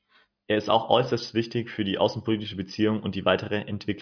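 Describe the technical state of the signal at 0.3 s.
At 0.3 s the speech signal is intact, with no audible dropout, distortion, clipping or other technical fault at that point.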